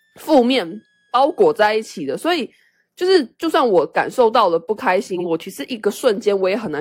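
From the start to 2.0 s there is a switching supply whistle: a thin high tone wandering between about 1.63 and 1.78 kHz, sitting roughly 45 dB below the speech. A nearby switching power supply is running in an audible burst mode or beating with another one, and its frequency shifts as its load changes, so the pitch drifts across that band instead of holding steady. It is faint.

Between 5.14 and 5.25 s the audio has frames out of order. Two adjacent blocks, each 46.4 ms long, were decoded in swapped order, which fits single frames trading places. The stretch plays its second half first, giving a brief garbled flutter. Because nothing is dropped or repeated, the timing after the event stays intact.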